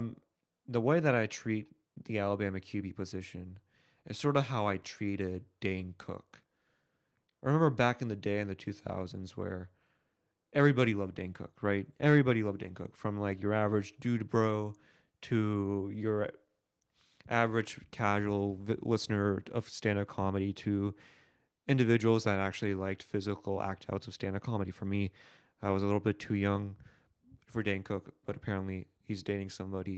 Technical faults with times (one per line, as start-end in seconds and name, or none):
none